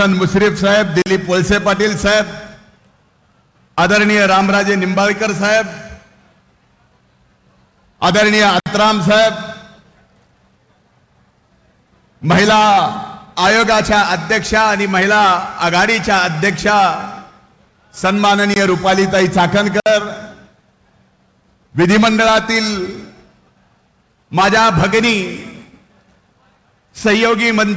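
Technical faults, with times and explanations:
1.02–1.06 s, 8.60–8.66 s, 18.54–18.56 s, 19.80–19.86 s: blocks of digital silence lasting 40, 60, 20 and 60 ms. Each time, the output buffer was left as zeros, most plausibly because it was not filled in time. The signal drops to silence and returns with no fade. The 60 ms gaps read as short holes. Behind them, the band stops at 8 kHz, as expected from a G.722 call path.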